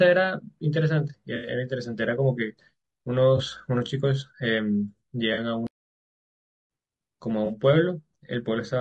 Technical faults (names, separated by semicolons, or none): low-delay AAC compression; AAC frame loss with concealment; playback stall